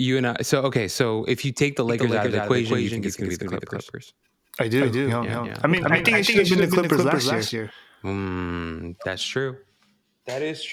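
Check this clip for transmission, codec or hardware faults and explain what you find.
One fault is present: a doubled audio track from 1.89 to 7.71 s, beginning just after "if you take the". A second, slower capture path or a misaligned edit has likely mixed the same speech in twice. A dry, full-band copy trails about a fifth of a second behind, a few decibels quieter, and cuts in and out abruptly.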